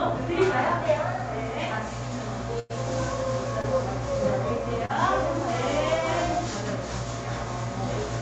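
From 2.59 to 2.72 s there is a burst of packet loss: roughly 100 ms of audio never arrived in time. The receiver extended the last received sound for about 100 ms and faded it down, so a held buzz or fading hiss replaces the real signal with no silent gap. Playback then picks up about 100 ms further on, and the material in between is gone.

Two short concealed packet losses follow, at 3.62 to 3.65 s (about 20 ms missing) and at 4.85 to 4.91 s (about 40 ms missing). In each, the decoder synthesised a continuation of the preceding sound and crossfaded back into real audio. They come across as a brief smear or wobble, and a short transient in those spans can disappear. All of this sits on the call codec's coding noise, with content above about 8 kHz cut off, which fits Opus at around 40 kbps.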